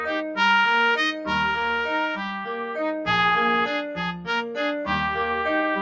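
Throughout the clip, a noise suppressor applied to music or sounds is at work. The suppressor mistakes sustained tones and reverb tails for noise. It pulls them down by around 5 dB while attacks pass. So the sound pumps and thins. Nothing is heard above 8 kHz.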